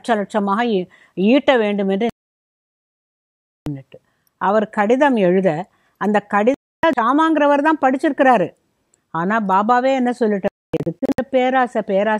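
At 2.10 s the sound cuts out completely until 3.67 s, a digital broadcast dropout: the receiver stopped getting decodable frames and muted, so about 1.6 s of programme is simply gone. A shorter hole follows from 6.54 to 6.84 s. From 10.48 to 11.19 s the audio breaks into several brief gaps, the longest 256 ms. On the waveform each gap is a flat, near-silent line; the spectrogram shows clean vertical blank bands.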